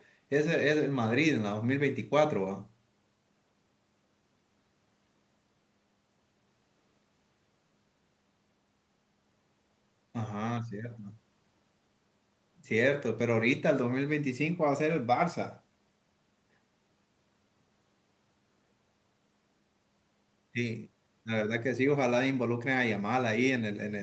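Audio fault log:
No faults heard anywhere in this speech recording.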